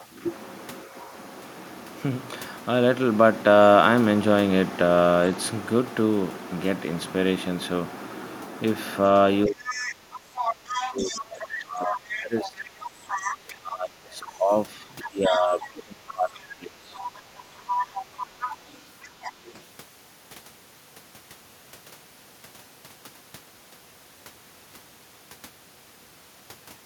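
From 9.47 to 12.65 s, the speech is suppressed in double talk. The talker dips hard, by around 25 dB at worst. The likely cause is an echo canceller that could not separate the talker from loudspeaker echo while both sides spoke, so it turned both down. The same happens from 13.48 to 16.99 s, and more briefly and lightly from 17.64 to 18.56 s. From 9.67 to 13.38 s, the other side's voice leaks through, about 10 dB below the speech. Shorter, fainter scraps follow at 14.2 to 14.35 s and 15.02 to 16.43 s. A stronger stretch runs from 16.96 to 19.63 s. Residual loudspeaker echo that the canceller likely missed reached the microphone.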